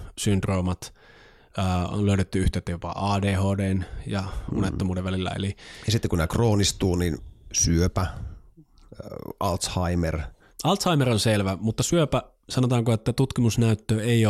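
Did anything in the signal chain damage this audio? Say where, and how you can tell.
No, nothing in this speech recording stood out on listening as damage from any stage of the signal chain.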